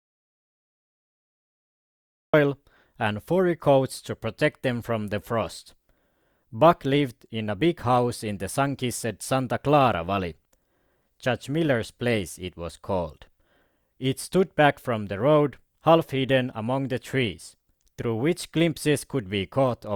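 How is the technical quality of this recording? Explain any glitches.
The recording opens with a stretch of dead silence before the speech arrives. This is an audio dropout to silence, running from the very start to 2.34 s. It is already in progress when the clip begins, so the first 2.34 s hold silence with no room tone at all. The likely cause is that the input was lost, through a disconnected device, a failed link or a stray mute, while recording carried on. The speech then cuts in abruptly mid-flow, and whatever came before is missing.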